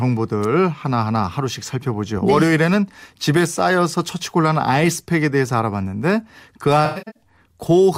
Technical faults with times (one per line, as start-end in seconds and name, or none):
6.85-7.23 AAC frame loss with concealment